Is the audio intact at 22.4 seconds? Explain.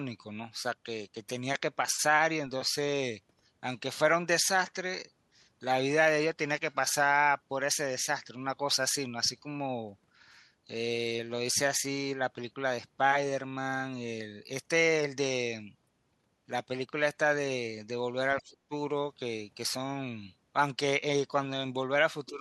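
No. Speech suppressed in double talk runs from 22.29 to 22.40 s, right at the end of the clip. The likely cause is an echo canceller that could not tell the near talker apart from loudspeaker echo while both sides were active, so it pulled the level down on everything. What you hear is the speech sagging by about 5 dB for roughly a tenth of a second, a brief duck rather than a full dropout.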